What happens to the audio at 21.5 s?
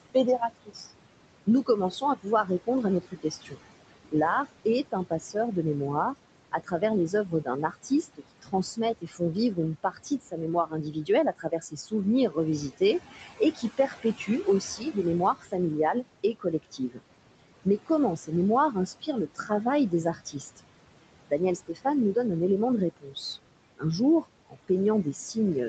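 Speech cut by the noise suppressor occurs from 21.28 to 22.16 s, just before "un élément de". The suppressor mistakes quiet parts of the speech for background noise and turns them down by up to about 21 dB, about a fifth of a second in total, so those sounds come out swallowed and faint.

Noise suppressor artifacts are also present at this moment, as they are throughout the clip. The suppressor keeps pulling the background down by about 21 dB, which leaves the remaining noise pumping between sounds.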